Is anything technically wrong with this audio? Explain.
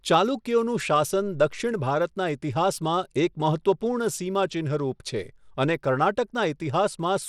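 Yes, there's Bluetooth SBC compression across the whole clip, and the damage is plainly audible on the speech. The treble flickers and a gritty noise rides on it, with nothing above 17.1 kHz. That's likely a small bit pool, around 96 kbps, starving SBC's upper sub-bands and coarsely quantising the rest.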